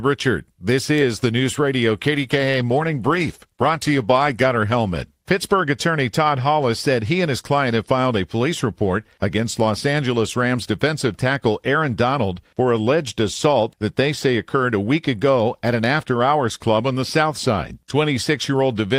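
From 2.14 s to 5.87 s the speech goes through a call bitrate drop. The encoder was starved of bits after the call's bandwidth estimate fell, so it coded more coarsely and trimmed the top end, which fits a fall from about 32 kbps to about 15 kbps. The sound turns muffled and watery, worst for about 1.7 s, then clears. Unlike packet loss, nothing drops out; the audio stays continuous but degraded.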